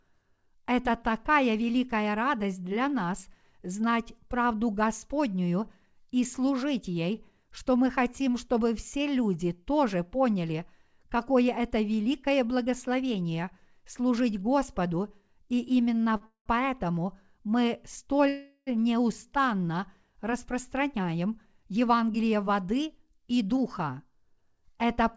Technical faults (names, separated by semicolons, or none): short stall from a late packet; call audio freeze; jitter buffer speed-up